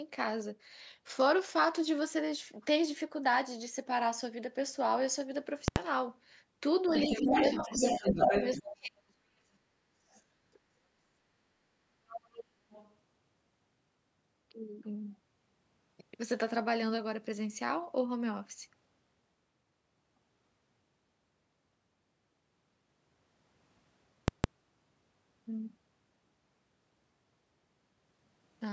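At 5.68 s a calculation in the processing chain produced invalid or infinite numbers, which were forced to the largest possible sample value. This is the fault of invalid numbers at full scale: for 80 ms, up to 5.76 s, the output is pinned at one extreme value, far beyond the speech peaks. The sound is a sharp pop where the block begins and another where it ends, with nothing but dead silence in between.

From 6.87 to 8.62 s the other side's voice is leaking through. The far end is being played on the talker's loudspeaker and picked up by the microphone, and the echo canceller has likely failed to subtract it. That second voice arrives at roughly the same level as the talker.

Over the same stretch there is speech suppressed in double talk. With both sides active, the canceller likely cannot separate the near voice from the echo, so it turns everything down. The talker's level sinks by roughly 15 dB between 6.88 and 7.34 s and roughly 10 dB between 7.6 and 8.21 s. 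Between 8.57 and 9.29 s it drops by about 35 dB, nearly cutting out.

Shorter scraps of the other side's voice return at 10.1 to 10.21 s and 10.53 to 10.59 s. Both are faint, around 35 dB under the speech. A clearer fragment follows from 12.08 to 12.44 s at roughly 15 dB below, and a weaker one from 12.71 to 12.95 s at roughly 25 dB below.

At 24.28 s invalid numbers at full scale occur again, this time for 160 ms until 24.44 s. The result is the same pair of loud pops around a silent block.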